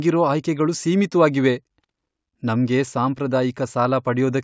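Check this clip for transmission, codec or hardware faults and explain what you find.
No transmission, codec or hardware faults.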